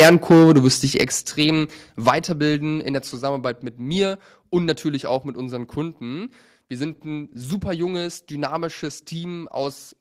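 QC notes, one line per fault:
0.00-0.68 s, 0.99-1.02 s, 1.40-1.45 s and 2.07-2.10 s, microphone overload: loud peaks sound flattened and crackly. The opening overshoots the ceiling by about 14 dB, with roughly a fifth of samples cut off, and later bursts by about 2 to 5 dB. Likely an input gain set too high for the converter.
1.02 s and 2.10 s, microphone volume stepped down: just after distorted peaks, voice and background fall abruptly together, by about 8 dB and then about 5 dB, consistent with the call software likely cutting the device's input volume in single steps to stop the clipping.
6.85-10.01 s, call bitrate drop: the encoder rate falls from 32 to 15 kbps and stays there to the end, about 3.2 s. With fewer bits to describe each frame, the speech is coded more coarsely and sounds rougher.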